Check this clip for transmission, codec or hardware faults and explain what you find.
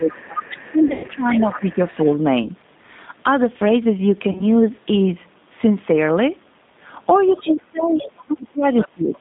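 Four faults are present: low-bitrate codec coding throughout, gain dips on the talker, a second voice bleeding in, and concealed packet loss.

G.729 codec, whole clip: audio is confined to about 150 Hz–3.7 kHz and rebuilt from a vocal tract model at 8 kbit/s, giving a rough, synthetic edge.

Speech suppressed in double talk at 0.0–0.31 s, 0.71–1.82 s and 7.31–9.18 s: the level drops by up to about 20, 15 and 25 dB. The likely cause is an echo canceller ducking the talker while both sides speak.

Other side's voice leaking through at 0.1–2.11 s, 7.83–8.22 s and 8.77–9.17 s: a second voice sits about 10, 15 and 10 dB below the talker. This is likely loudspeaker echo left in the microphone signal.

VoIP packet loss concealed by the speech codec at 0.88–1.11 s, 2.43–2.49 s and 4.31–4.45 s: the decoder extrapolates from the last frames. This gives stretches of buzzy tone or coloured noise that fade. 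The first event loses 160 ms, with a run of up to 120 ms.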